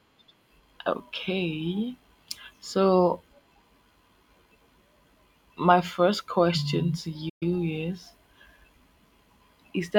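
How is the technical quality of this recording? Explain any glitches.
There is one glitch in this speech recording: a playback stall at 7.29 to 7.43 s. The audio cuts out in mid-flow. The silence lasts 120 ms. Then the speech carries on. The likely cause is that the player ran short of data, or its audio thread was held up. With nothing to send to the output, it went silent until it could continue.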